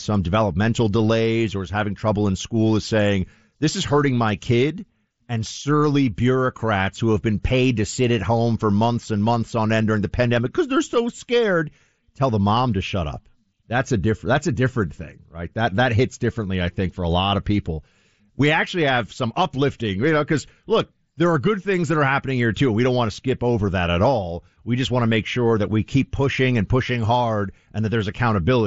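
No technical faults are audible.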